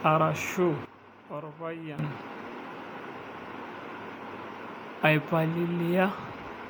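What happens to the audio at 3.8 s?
At 3.8 s the speech shows generation loss, which runs through the whole clip. It likely passed through MP3 encoding around seven times, at a rate that fits 128 kbit/s, each pass re-quantising on a shifted frame grid. The result is swirly, hollow, smeared consonant attacks, with nothing above about 19.9 kHz.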